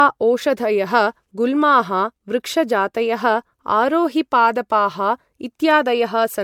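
From start to finish the speech has a swirly, watery texture, with hollow-sounding gaps in the spectrum and consonant attacks that smear rather than snap. Nothing remains above 20 kHz. The damage is heavier than a single encode at the bitrate the sound points to, around 96 kbit/s MP3, would leave. This is likely generation loss: roughly three successive MP3 encodes, each requantising on a shifted frame grid so that noise and holes accumulate.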